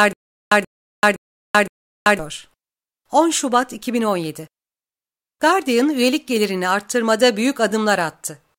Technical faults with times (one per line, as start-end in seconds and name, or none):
0.00-2.19 stutter with silent gaps